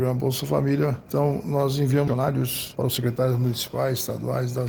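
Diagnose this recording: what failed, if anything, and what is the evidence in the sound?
A skip ahead happens at the network and jitter-buffer stage at 2.07–2.09 s. Roughly a second of audio vanishes and the two sides are joined with no silent gap, unlike a dropout, which would leave a hole or a fill. The audio was lost on the way or discarded by the buffer to catch up.

A jitter buffer speed-up follows from 2.11 to 3.94 s. The sound runs at about 125% pace while the pitch stays put, which rules out a sample-rate or clock mismatch. Repeated pitch-period cuts trimmed roughly half a second to shrink the buffer's excess delay.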